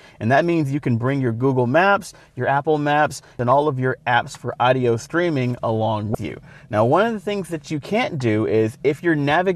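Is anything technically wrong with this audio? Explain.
Yes. Damaged data in a compressed stream appears from 6.12 to 6.15 s. A short stretch of the encoded file is corrupt, so the decoder misreads those frames and loses sync until it finds the next valid frame header. It sounds like a brief chirp or blip of about 34 ms breaking into the sound.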